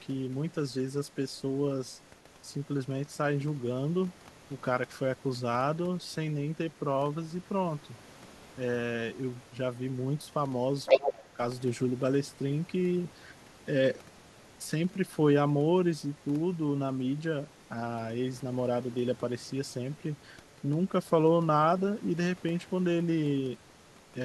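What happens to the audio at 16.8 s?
An echo canceller likely failed to fully remove the far end's loudspeaker playback, so the other side's voice leaks through very faintly from 16.15 to 17.62 s.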